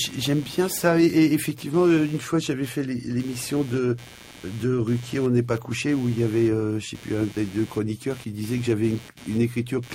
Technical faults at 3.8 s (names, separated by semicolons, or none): computer activity noise